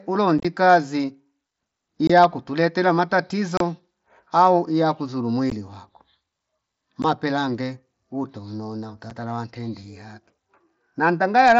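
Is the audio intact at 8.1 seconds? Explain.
Yes, the audio is intact at 8.1 seconds, with no dropout, glitch or other fault at that moment.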